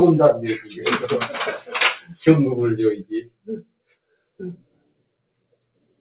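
A noise suppressor applied to music or sounds runs across the whole clip. It was built for speech, so it treats sustained, steady parts of the sound as noise and turns them down, swinging the level by around 15 dB. Onsets slip through and then sag, so the sound pumps and thins. On a waveform the envelope shows sharp peaks with tails pulled down early. A spectrogram shows energy that breaks up and dims instead of fading smoothly. It is all heard through a call path with nothing above 4 kHz, which points to G.711 mu-law at 64 kbps.

The sound is cut by the noise suppressor at 0.6 to 0.84 s, with a drop of about 11 dB, and at 2.0 to 2.25 s, with a drop of about 12 dB. The heaviest cuts come at 3.02 to 4.4 s and from 4.57 s to the end, each reaching about 19 dB. In these spans the held and decaying parts sink while brief attacks survive. The waveform narrows abruptly, and the spectrogram shows dark gaps where the sustained energy should continue.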